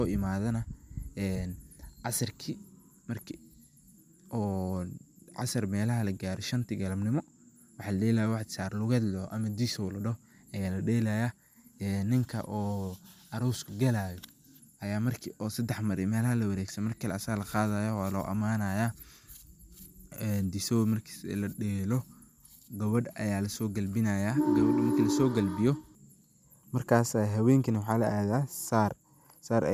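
No technical faults are audible.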